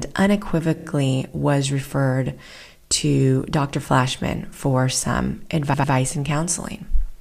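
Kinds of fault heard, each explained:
Repeated frames: a short run of compressed frames is decoded again, so the same slice of speech replays as a stutter. A 39 ms block plays three extra times just before "was referred to", and an 88 ms block repeats twice after "for some", adding about 0.2 s.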